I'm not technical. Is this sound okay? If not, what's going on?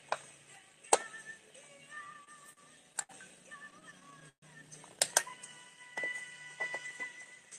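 No. There are two kinds of problems. From 1.95 to 3.11 s, and again from 3.71 to 4.44 s, you hear repeated stalls, or stutter. Sound arrived late, so playback kept pausing and stretching the last bit, seven times in each stretch, up to 132 ms at once. Nothing is lost, but it drags.

From 7.00 to 7.52 s there is a jitter buffer speed-up. To catch up after the delays, the player cut out tiny slices, roughly 40 ms in all. That part runs at 107% speed, a little hurried but at the same pitch.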